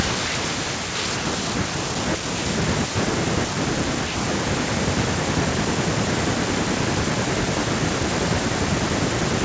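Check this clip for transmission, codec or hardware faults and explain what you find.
Nothing stood out on listening to this speech, which has passed through call microphone processing that rolls off the deepest bass and carries nothing above 8 kHz.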